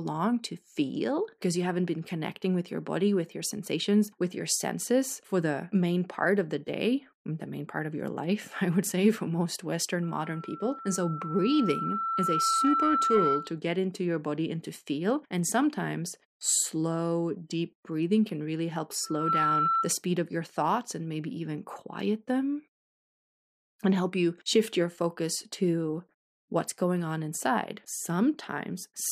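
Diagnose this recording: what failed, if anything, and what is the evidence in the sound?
Loudspeaker feedback squeal at 10.02 to 13.59 s and again at 19.04 to 19.94 s, a failure in the analogue acoustic loop between microphone, amplifier and loudspeaker. Both times a steady 1.3 kHz tone rises out of the speech, swelling over about three seconds in the first event and within a fraction of a second in the second, peaking around 5 dB above the speech. The microphone picks up its own loudspeaker, and at 1.3 kHz the loop gain exceeds one, so that frequency keeps reinforcing itself.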